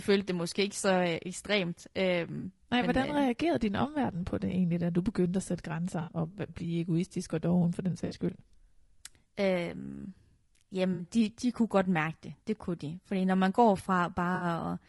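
Throughout the speech, the coding points to a likely cause in low-delay AAC compression (AAC-ELD) at a low rate, around 32 kbps. Too few bits reach each frame's spectrum, so the voice sounds plainly rough and grainy, with noise filling between harmonics and a synthetic-sounding top band.

AAC frame loss with concealment occurs at 2.39 s (40 ms, just before "men hvordan øh reagerede"), then for 60 ms each at 6.01 s (just after "du begyndte at sætte"), 8.05 s, 10.93 s (just before "de de kunne godt") and 14.35 s. Missing frames, two in the first gap and three in each later one, are rebuilt by the decoder from the last good spectrum, leaving short smeared, noisy or phasey patches.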